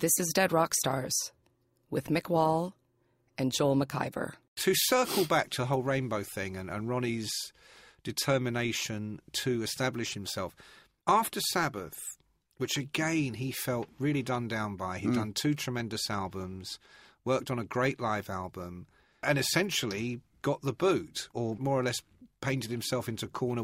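From 12.15 to 22.15 s there are periodic USB or driver dropouts: every 2.0 s, a tiny sliver of speech gets skipped, leaving regular ticks.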